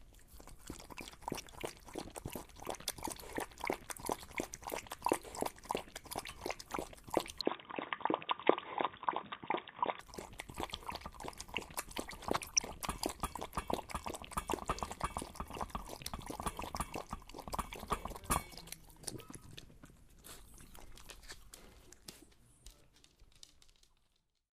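DAB burbling at 1.37 to 1.53 s and 6.65 to 6.80 s: with weak reception, a fraction of a percent of bits slip past error correction into the MP2 data; corrupted samples put short noise blips into single sub-bands, and corrupted scale factors make sub-bands leap in level, giving brief noise blips.

Input switched to a poorer device, likely, from 7.41 to 10.0 s: the sound abruptly narrows, with nothing above 3.8 kHz, a level shift of about 5 dB and a new noise floor about 40 dB down, turning dull and boxy with no gap at the switch.

DAB burbling returns from 12.22 to 12.60 s, a longer burst spanning many frames.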